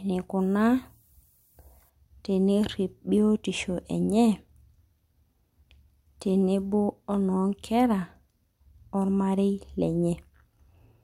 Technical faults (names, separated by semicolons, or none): low bit depth with noise shaping